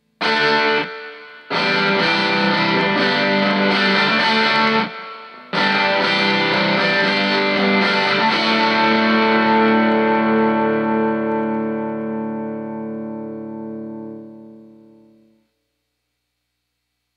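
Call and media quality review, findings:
Clock slip clicks: faint regular ticking, about every tenth of a second, around 150 in total from 0.13 to 17.14 s. Likely two unsynchronised clocks about 200 ppm apart, each slip dropping or repeating a single sample.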